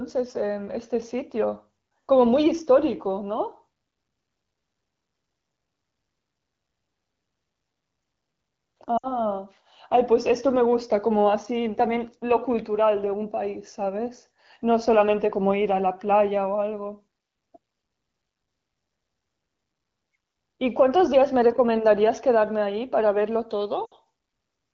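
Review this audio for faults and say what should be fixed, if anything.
Lost AMR speech frames occur twice, at 8.97 to 9.12 s and 23.85 to 23.94 s. Each loss spans about 60 ms, consistent with three consecutive 20 ms frames failing their checksum. The decoder conceals the gap by repeating the last good pitch and vocal tract parameters with decaying gain, so the speech smears briefly and fades quickly, as is typical of wideband concealment, then resumes weak or rough. The AMR-WB (HD Voice) coding at 12.65 kbit/s carries the speech clearly around these dropouts. Fix the radio link's error rate through better coverage, or add stronger channel coding or redundancy so corrupted frames are not discarded.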